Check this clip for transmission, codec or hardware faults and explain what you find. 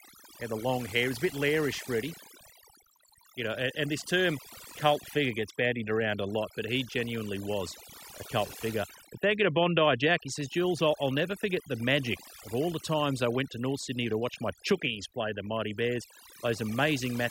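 Overdone noise removal runs through the whole clip: a noise reducer set too strong mutes frequency bands near its noise estimate, leaving near-silent, twinkling gaps and losing quiet parts of the voice.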